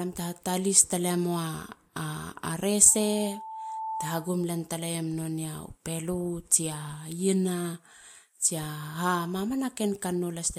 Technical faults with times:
2.87-4.45 loudspeaker feedback squeal

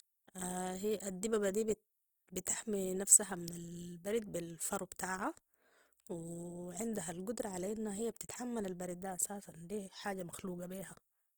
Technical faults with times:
0.00-11.38 Opus compression

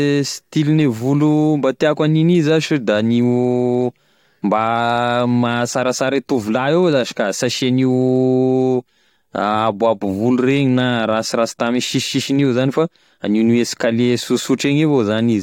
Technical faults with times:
none

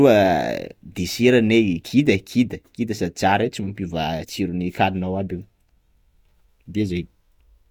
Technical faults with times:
none

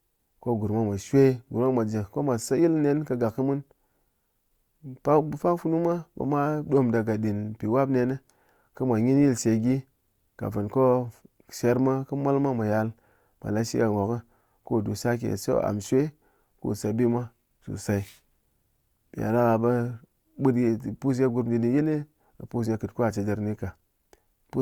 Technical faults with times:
1.35-24.03 clock slip clicks

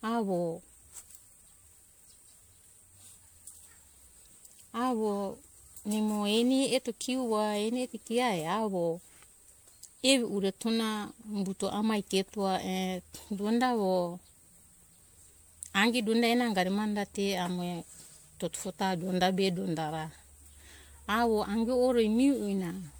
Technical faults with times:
0.00-23.00 generation loss

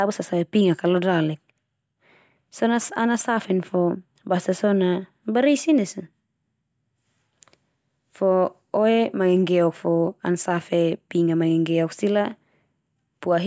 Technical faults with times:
none

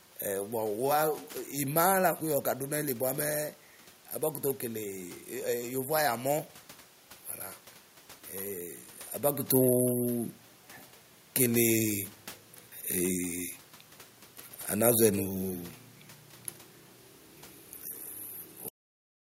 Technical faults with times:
18.68-19.39 cut-off end

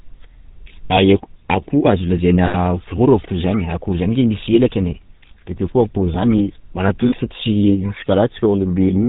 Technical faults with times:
0.00-9.09 GSM full-rate codec
0.86-0.91 lost GSM frames
2.46-2.55 lost GSM frames
5.28-5.31 lost GSM frames
7.08-7.13 lost GSM frames

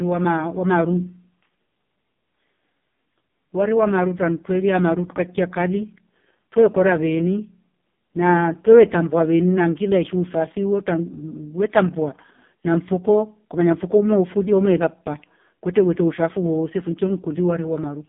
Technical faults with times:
0.00-18.09 AMR narrowband mobile codec

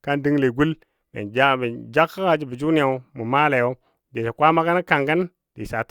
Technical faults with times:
none

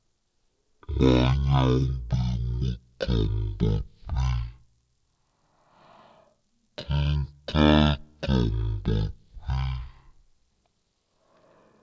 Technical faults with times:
0.00-11.82 wrong sample rate

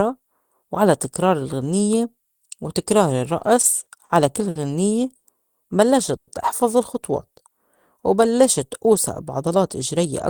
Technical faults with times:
3.39-4.12 repeated stalls (stutter)
4.49-4.58 short stall from a late packet
5.15-5.27 short stall from a late packet
6.16-6.30 call audio freeze
7.26-7.54 jitter buffer slow-down
9.48-10.06 jitter buffer speed-up

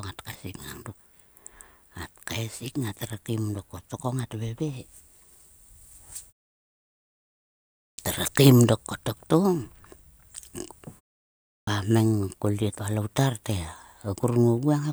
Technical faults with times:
7.87-7.98 clipped start after a pause
11.57-11.67 clipped start after a pause

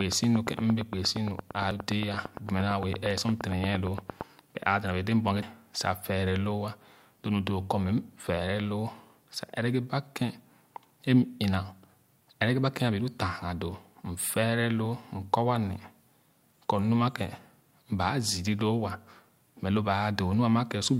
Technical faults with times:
0.01-4.22 train of clicks
1.71 damaged data in a compressed stream
2.56-3.38 CD scratch ticks
5.42 damaged data in a compressed stream

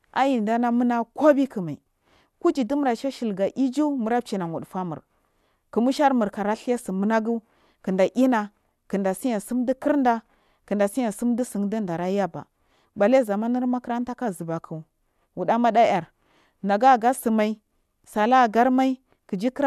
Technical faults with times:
none

